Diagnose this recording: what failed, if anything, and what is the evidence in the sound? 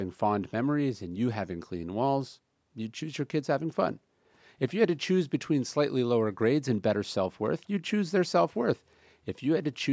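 Nothing in the speech points to a failure at any stage of the chain. The call microphone processing is audible as a band limit, with no content above 8 kHz and the lowest bass trimmed, which is normal for that path.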